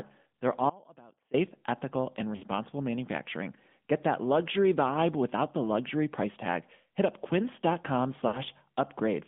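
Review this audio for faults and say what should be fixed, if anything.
AMR narrowband mobile codec, throughout the 9-second clip. The speech is confined to roughly 150 Hz to 3.5 kHz, with nothing above that band. The codec rebuilds the voice from a vocal-tract model driven by a few pulses per sub-frame, and its damage is plainly audible as a buzzy, synthetic edge. That character fits a mid-rate mode around 10.2 kbps. Prevention: carry the call over a wideband or higher-rate codec path.

Audio dropout to a faint residue, 0.70 to 1.34 s. The speech cuts out abruptly for about 0.64 s and then returns mid-flow. Through the gap only a faint trace remains, roughly 25 dB below normal level. This is not a pause or a fade. The likely cause is that the wanted signal was lost while the path after the break stayed live, so the sound stops suddenly instead of tapering. Prevention: secure the source connection and monitor the input so breaks are caught at capture.

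Lost AMR speech frames, 2.36 to 2.44 s and 8.28 to 8.42 s. Each event loses about 60 ms of audio, which fits three consecutive 20 ms frames failing. The decoder filled each hole by repeating the last good pitch and vocal-tract settings at falling gain. The result is a short smeared, warbling dip before the speech recovers, briefly rough. Prevention: improve radio link quality or add stronger channel protection so fewer frames fail their checksum.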